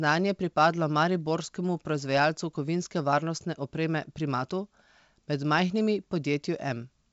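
No faults are audible in this speech, which runs over a G.722 wideband telephone coding path at 64 kbit/s with nothing above 7.7 kHz.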